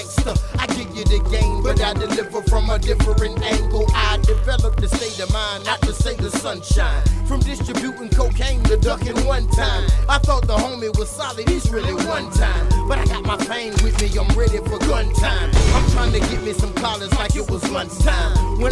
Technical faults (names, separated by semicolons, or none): resampler restarted on every block